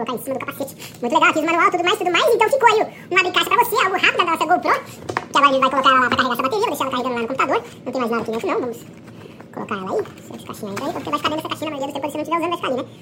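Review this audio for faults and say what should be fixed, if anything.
Throughout the clip the audio is read two samples at a time (double speed): the player treats each pair of samples as one frame, so everything runs at 2x speed and 12 semitones higher. Prevent it by making sure the reader's channel count and sample width match the file's header.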